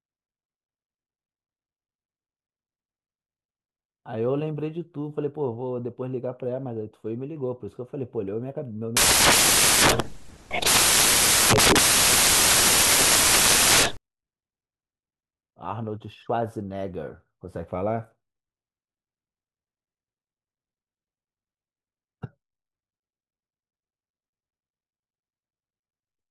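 From 8.97 to 13.97 s, samples built from the wrong bytes turn the speech into loud white noise.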